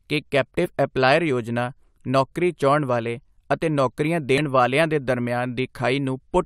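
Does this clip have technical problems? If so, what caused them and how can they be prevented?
Yes, there's damaged data in a compressed stream, heard as two brief glitches in the speech: one from 0.64 to 0.66 s, just before "ਐਪਲਾਇਰ ਯੋਜਨਾ ਨੌਕਰੀ ਚਾਹੁੰਣ", and another from 4.38 to 4.40 s, between "ਚਾਹੁੰਣ ਵਾਲੇ ਅਤੇ ਨੌਕਰੀਆਂ" and "ਵਾਲੀਆਂ ਦੇ". At each spot some bytes of the encoded file were corrupted, so the decoder misread those frames, lost sync and searched for the next valid frame. To prevent it, check file integrity with checksums during transfer and storage, and use a transport with error correction or retransmission.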